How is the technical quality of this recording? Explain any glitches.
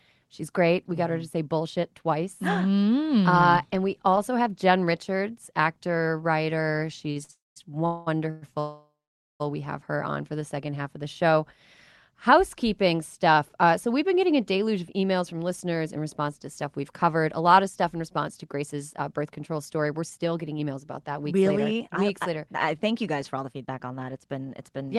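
The recording has a cluster of network glitches between 7.1 and 9.4 s and a later stretch of hurried playback. The audio sits in a call-codec band that tops out near 12 kHz.

Short stalls from late packets, at 7.11 to 7.18 s and 7.24 to 7.31 s: the jitter buffer briefly ran dry, so the last sound is held 41 ms and 54 ms, then resumes without loss.

Call audio freezes, at 7.31 to 7.58 s, 7.86 to 8.08 s, 8.30 to 8.44 s and 8.60 to 9.42 s: the sound smears into a fading buzz. The first and last fall to silence for about 180 ms and 480 ms. The longest gap is 800 ms. The likely cause is packets held up in transit, and playback then continues where it stopped.

Jitter buffer speed-up, from 17.53 to 24.15 s: the receiver trimmed short pitch-period slices to shed accumulated delay, roughly half a second in total. The audio runs at 108% speed at unchanged pitch and sounds rushed.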